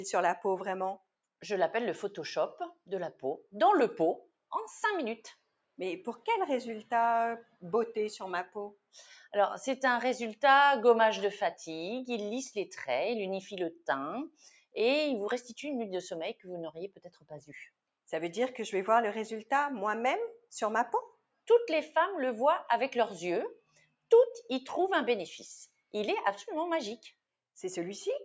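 Throughout, a noise suppressor applied to music or sounds is treating sustained material as noise. Attacks pass largely intact while held tones, ambience and decays are pulled down, so the level swings by roughly 5 dB and the sound pumps and thins between onsets. The signal also carries the call microphone path's band limit, with nothing above 8 kHz.

On top of that pumping, there are eight points where sound is cut by the noise suppressor. At 5.34–5.78 s, 7.43–7.62 s, 8.73–8.95 s, 9.12–9.29 s, 14.29–14.76 s, 16.9–17.49 s, 21.11–21.48 s and 23.56–24.11 s, the suppressor judges a steady or fading passage to be noise and attenuates it harder, by about 7 dB at 9.12 s and about 17 to 22 dB elsewhere. Each lasts a fraction of a second and is heard as the sound sinking in level or its tail being chopped short.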